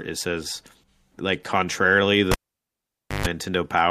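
At 2.32 s a cable is pulled out and plugged in again while live. A pop marks the moment contact breaks. The speech drops to near silence for about 0.89 s. Then 50 Hz mains buzz bursts in for about 130 ms. This is the plug tip touching before the connector is fully seated, so the input picks up hum instead of signal. A second pop comes at 3.26 s as the speech returns.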